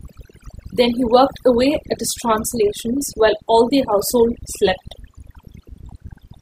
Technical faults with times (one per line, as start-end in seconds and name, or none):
0.00-6.41 overdone noise removal